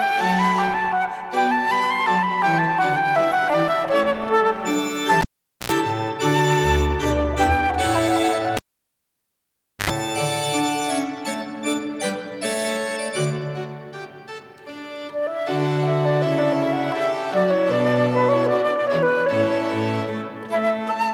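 At 5.21 to 5.72 s and 8.57 to 9.90 s, a cable is pulled and plugged in. Each time a pop gives a vertical spike, then near silence appears as a flat, empty gap (0.46 s, then 1.28 s). On reconnection an 85 ms, then 81 ms, mains buzz at 60 Hz, then 50 Hz, shows as stacked harmonic lines before a closing pop.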